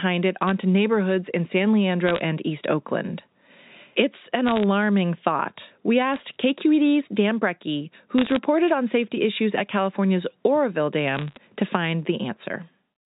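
Short bursts of crackle from bit errors on a digital phone line sit over the speech at 0.42 to 0.51 s, 2.07 to 2.20 s, 4.46 to 4.63 s, 6.14 to 6.20 s, 8.18 to 8.36 s and 11.15 to 11.37 s. Within each burst, flipped bits on the G.711 mu-law line corrupt single samples. A flip in a high-order bit, or in the sign of a loud sample, throws that sample far off, so it sounds as a sharp tick. The error rate is a fraction of a percent. On a waveform these show as isolated one-sample spikes. On a spectrogram they are thin vertical lines running across the whole band up to the 4 kHz telephone limit.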